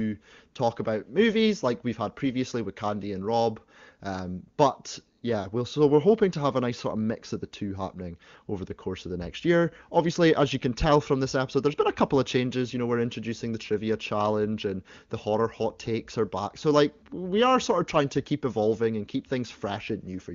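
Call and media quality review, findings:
No faults found in this call and media quality review; the speech comes through the AMR wideband (HD Voice) path at 23.85 kbit/s with little or no audible coding damage.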